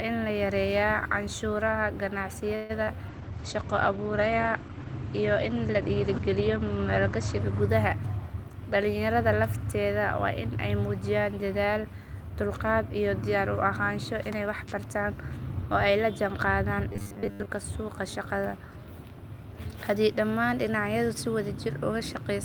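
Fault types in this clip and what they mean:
call audio freeze: At 2.55 s the sound stalls into a fading buzz for about 0.14 s, then resumes intact, likely because delayed packets drained the jitter buffer.
short concealed packet loss: A brief smear from 2.83 to 2.97 s, where about 40 ms of lost audio was patched by extending the preceding sound, then blended back.
call bitrate drop: From 3.09 to 8.46 s the sound turns muffled and rough as the encoder falls from 32 to 12 kbps, bandwidth narrowing from 20 kHz to 8 kHz.
jitter buffer speed-up: The audio hurries at unchanged pitch, 105% from 13.08 to 13.66 s and 107% until "oo ay la jaan", as pitch-period slices are trimmed.
robotic sound from repeated short buffers: After "ay la jaan qaadaan" and until "suuqa shaqada", a rigid metallic 100 Hz buzz, likely from a roughly 10 ms buffer replayed repeatedly.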